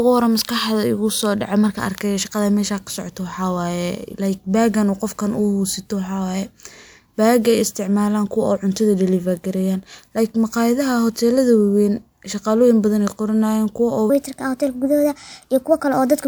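A playback or editing stage running the final stretch against the wrong clock is the likely cause of a section at the wrong speed in this speech recording. From 14.10 s to the end at 16.28 s, the audio runs 1.27 times faster than it was captured, and because speed and pitch shift together, the voice jumps up by about four semitones and sounds high and hurried compared with the preceding fourteen seconds.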